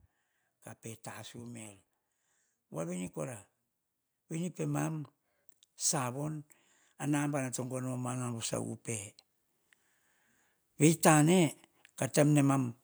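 A speech recording with one problem: automatic gain rising from about 7.03 s to 8.8 s. Over that stretch of roughly 1.8 s, the voice and the background noise swell up together by about 4 dB. That's the AGC deciding the input had gone too quiet and slowly winding its gain up. Because the noise floor rises right along with the voice, it's clearly the processing and not the talker getting louder.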